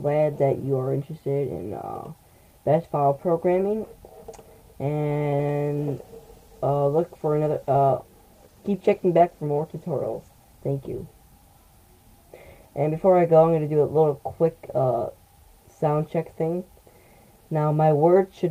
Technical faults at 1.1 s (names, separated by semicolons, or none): none